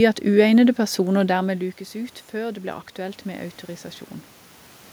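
From 0.76 s to 3.61 s the automatic gain rises. The input fell by about 13 dB when the talker moved away, around one second, and the gain control slowly climbed about 4 dB, so speech and room noise swell together.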